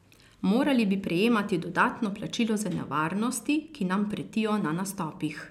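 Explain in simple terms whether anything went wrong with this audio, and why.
Nothing went wrong here: the speech comes through steadily, with no break, jump or sudden change anywhere in the signal.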